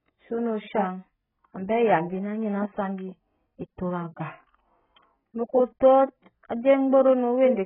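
From start to finish the speech has nothing above 3.8 kHz and a heavy, warbling, smeared texture, likely from AAC compression at a very low bitrate, around 8 kbps. Unlike a simple low-pass filter, the coder also blurs and destabilises what remains below the cut-off.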